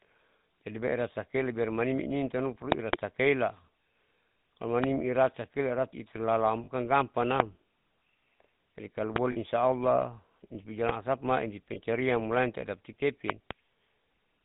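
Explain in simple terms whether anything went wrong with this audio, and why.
Yes, two things went wrong. The whole recording went through the GSM full-rate codec, the old mobile-phone voice coder. It rebuilds speech from a simple model of the throat and a pulse train, and passes nothing above 4 kHz, so the speech sounds buzzy, gravelly and muffled from start to finish.

On top of that there are lost GSM frames at 6.64 s, 9.32 s (right after "jadi kalo") and 11.74 s. The missing bits were filled in by repeating the last good chunk, which gives a short metallic, ringing blip lasting about 20 to 40 ms.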